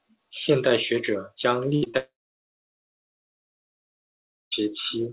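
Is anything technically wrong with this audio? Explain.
Yes. The speech has several network faults.

A burst of packet loss comes at 1.76 to 1.84 s, just after "代学者将". About 60 ms of audio never arrived. The receiver kept extending the last sound and faded it, so there is a brief held buzz or hiss. The speech then picks up further along. The stretch in between is simply gone.

Two short concealed packet losses follow, at 1.84 to 1.88 s and 1.92 to 1.96 s. Each hole is about 20 ms. The decoder patched each one by continuing the previous sound, then blended back into real audio. They come across as small smears or wobbles. A short consonant may be swallowed.

A long network dropout runs from 1.98 to 4.54 s, most likely a loss of connection. About 2.5 s of speech is missing. The concealment briefly carries the last sound forward as a fading buzz or hiss. Then about 2.4 s of silence follows. 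The speech resumes past the lost section, and through the whole clip the G.711 call path's band limit leaves nothing above 4 kHz.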